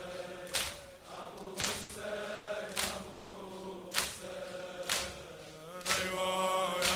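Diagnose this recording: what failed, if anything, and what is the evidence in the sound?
Repeated stalls (stutter) between 1.15 and 1.91 s: five short holds adding up to 180 ms, the longest 80 ms, covering about a quarter of that stretch. It's a network and jitter-buffer problem. Packets kept arriving late, the buffer ran dry, and the receiver stretched the last sound, so the audio drags with nothing lost.

Two call audio freezes follow, at 2.35 to 2.49 s (120 ms held) and 3.11 to 3.35 s (220 ms held). The last sound hangs on as a fading buzz or hiss, never dropping to silence, then resumes where it stopped. A network delay spike likely emptied the jitter buffer, pushing everything later.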